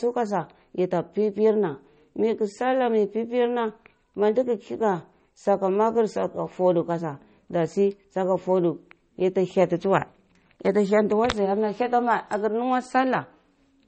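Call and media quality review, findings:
MP3 compression, likely cause, throughout the speech: encoder starved of bits, consistent with roughly 32 kbps. Treble cut flat at 8.4 kHz, nothing above. Weak frequency lines zeroed and switching between frames, so plainly audible codec damage with a dull, watery texture across the clip.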